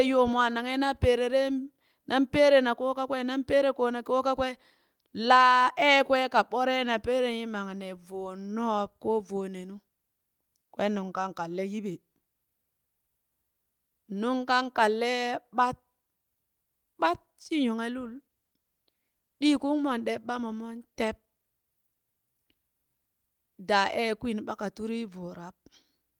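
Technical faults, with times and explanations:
18.0 to 21.0 s, call bitrate drop: the speech turns coarser and rough, with a grainy, less detailed texture that sits at its worst for about 2.2 s before clarity returns. The call's bandwidth estimate fell, so the encoder was told to spend far fewer bits per second and had to quantise the signal more crudely. The degradation fits a fall from around 32 kbps to about 18 kbps, easing once the rate climbs back.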